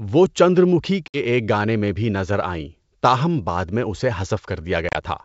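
At 1.08 s and 4.89 s, packet loss on an ADPCM call punches silent holes, 60 ms each. The second gap is scattered over 140 ms. The decoder's predictor drifts, so speech returns briefly slightly distorted.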